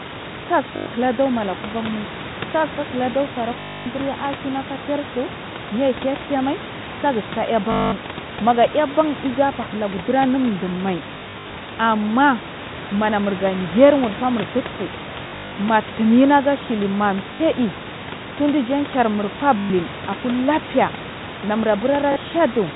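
Speech over a call, with packet loss with last packet repeated: robotic stutters buzzing near 50 Hz, which fits 20 ms packets, at 0.76 (before "durmala kuvanmai"), 3.6, 7.72, 11.14, 15.24, 17.34, 19.58 and 22.12 s.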